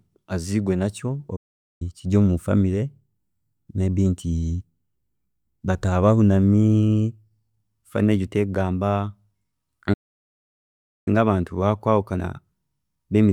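The player most likely ran short of data or had its output thread held up, so it emitted silence until it recovered. In this speech that produces two playback stalls. From 1.36 to 1.82 s the sound cuts off mid-flow for about 0.44 s, then resumes with "kiri omu family". From 9.93 to 11.08 s a longer stall of about 1.13 s leaves a clear, abrupt gap before the audio continues.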